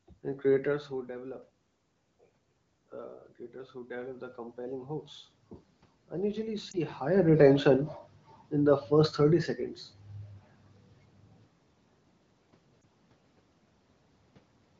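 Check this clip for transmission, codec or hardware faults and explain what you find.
Two kinds of fault are audible: a gain-control swell and two brief dropouts from lost speech frames, heard through wideband coding whose clean quality fits AMR-WB at about 15.85 kbit/s.

From 3.86 to 5.15 s, just after "creators who", there is automatic gain rising. The input level fell by about 13 dB, and the gain control responded by gradually adding about 4 dB. Voice and room noise swell together over roughly 1.3 seconds.

Lost AMR speech frames occur at 6.71 to 6.77 s, just before "higher retention", and again at 12.81 s. Each is a single 20 ms frame that failed its check. The decoder filled the gap by repeating the previous pitch and vocal tract settings at reduced gain, which is heard as a short dip or warble.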